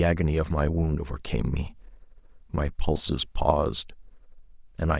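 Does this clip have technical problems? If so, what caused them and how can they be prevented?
No, this speech clip has no technical problems that can be heard. Since nothing went wrong, there is no cause to trace and nothing to prevent.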